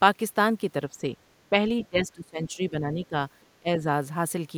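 Speech suppressed in double talk occurs at 0.89 to 1.11 s, 1.5 to 1.6 s, 1.9 to 3.15 s and 3.6 to 3.86 s. The speech dips by roughly 10 dB, a few dB, up to 20 dB for about a second, then around 15 dB. An echo canceller, likely confused by both sides talking at once, turned the talker down along with the echo.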